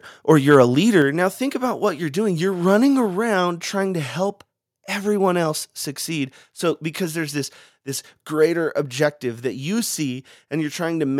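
From 0.3 to 0.56 s, the input level was likely set too high for the converter, so the loudest peaks overshoot its ceiling by about 2 dB. This is microphone overload: the tops of those waveforms are sliced flat, affecting about 0.7 percent of samples. Even that small share is audible, because each flattened peak adds a brief harsh, crackling edge to the strongest syllables in this speech stretch.

At 1.02 s comes a microphone volume stepped down event, most likely the call software reacting to that overload by cutting the device's input gain in a single move of about 4 dB. The speech and the background behind it drop together, abruptly rather than fading, so the level falls just after the distorted peaks and stays lower from then on.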